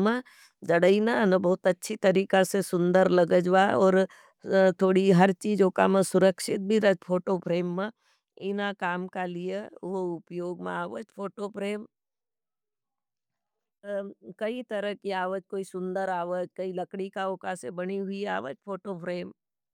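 From 6.8 to 8.08 s, zipper noise: the level drops about 10 dB in unsmoothed steps, roughly fifteen per second, each leaving an audible tick.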